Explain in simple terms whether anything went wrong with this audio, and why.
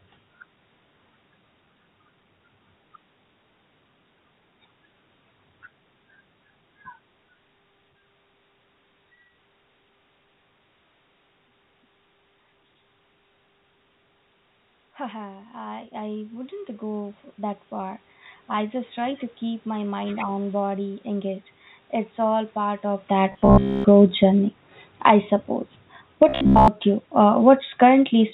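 Between 15.1 and 18.87 seconds, the automatic gain rising fault occurs. The recording system decided the sound was too quiet. It turned itself up slowly. The speech and the room noise swell together over several seconds, not just the voice.

From 22.18 to 28.29 seconds, the opposite happens: automatic gain falling. The system judged the sound too loud and slowly turned it down. Everything sinks together, voice and background alike. A talker shifting position near 23 seconds also changes the level, but that is natural.

Twice the speech turns buzzy and mechanical: from 23.32 to 23.86 seconds and from 26.29 to 26.68 seconds. This is the robotic sound from repeated short buffers. A steady low buzz near 66.7 Hz is laid over the voice. The likely cause is late audio being covered up by repeating tiny slices about 15 ms long. Most of the real sound in those moments is lost.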